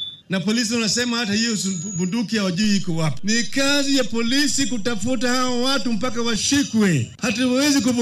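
A DC step at 2.64 s shifts the waveform's zero line by about −25 dBFS, heard as a low thump, and the offset holds until stepping back at 6.36 s.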